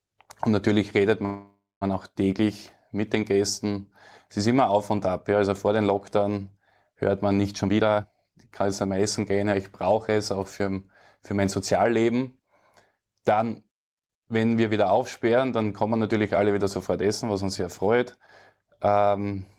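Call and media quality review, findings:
Call audio freeze, 1.25 to 1.83 s. Sound stalls and is bridged by a fading continuation of the last sound, then about 220 ms of silence. Roughly 560 ms inserted, nothing lost, playback resumes where it stopped. Likely delayed packets draining the jitter buffer.

Jitter buffer speed-up, 7.53 to 9.45 s at 127% speed, pitch unchanged, roughly half a second removed; again 9.95 to 10.60 s at 105%, a few tens of ms. Receiver trimming pitch-period slices to shed excess buffered delay. Hurried delivery.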